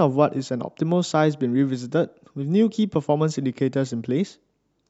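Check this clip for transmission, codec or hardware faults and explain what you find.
No transmission, codec or hardware fault can be heard in this speech. There is nothing to flag from any of those three sources.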